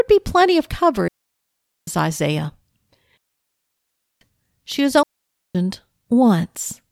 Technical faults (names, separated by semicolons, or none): digital wireless dropout